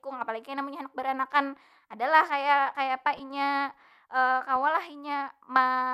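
Right after "baranakan adalah kaya kayapa", from 3.17 to 3.20 s, there's a corrupt frame decoded: roughly a single compressed frame got its bits scrambled, and the decoder played it anyway. The misread gains and codes drop energy at frequencies that don't belong in the speech for those 30 ms or so, giving a short chirpy blip. It's not loud, peaking somewhere around -30 dBFS.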